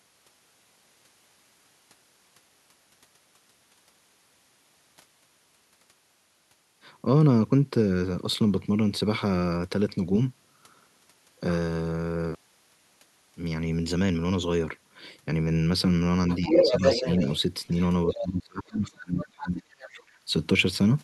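From 16.29 to 17.4 s, the other side's voice leaks through. It sits a little above the talker, likely loudspeaker echo the canceller missed. Inside that span, from 16.48 to 17.07 s, speech is suppressed in double talk. The talker dips slightly, likely because the canceller turned both voices down. A short, quieter echo scrap returns at 18.07 to 18.23 s. From 18.14 to 20.11 s, the double-talk suppression deepens. The talker drops by about 30 dB, with the suppression affecting roughly two seconds. Faint echo fragments, well below speech level, appear at 19.19 to 19.25 s, 19.43 to 19.5 s, and 19.79 to 19.89 s.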